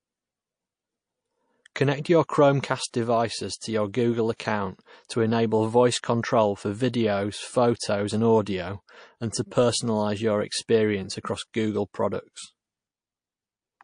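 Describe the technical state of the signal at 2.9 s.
Pre-echo runs from 2.90 to 2.94 s, just after "your chromecast". A sharp attack lands late in a transform block. The coder spreads quantisation noise evenly across the block, so noise sized for the loud onset also fills the quiet 33 ms before it, rising about 18 dB above the background. The smear fits a block of roughly 52 ms with no switch to shorter blocks. The result is a brief hiss ahead of the attack, which itself sounds soft and blurred.

MP3 compression damage is plainly audible here and across the whole speech clip. The likely cause is heavy MP3 encoding, and the degree of damage points to a bitrate around 40 kbps. With so few bits, the encoder drops weak frequency lines that flicker on and off between frames. That gives the sound a watery, swirling texture, with metallic chirps on sibilants and smeared onsets around this moment.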